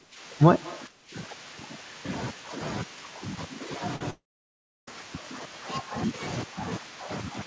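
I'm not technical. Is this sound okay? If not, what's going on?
No. There are several distinct problems, all in the first five seconds.

From the very start to 0.19 s, and again from 0.89 to 1.14 s, the speech briefly sinks or goes muffled. That's speech suppressed in double talk, likely from the call's echo control turning everything down while both sides spoke.

Between 0.62 and 0.79 s a faint, slightly delayed repeat of the speech comes through, trailing about 0.18 s behind. This is an echo leak, likely the far end's loudspeaker sound getting back into its microphone.

At about 3.96 to 4.01 s there's a tiny smear where roughly a twentieth of a second went missing and was patched over. This is short concealed packet loss.

From 4.10 to 4.88 s the sound briefly continues as a fading buzz or hiss, then goes quiet for most of that stretch, and speech resumes with that piece gone. That's a long network dropout, likely a gap in the connection.

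The call itself carries nothing above 8 kHz, which gives the usual slightly dulled phone-call top end.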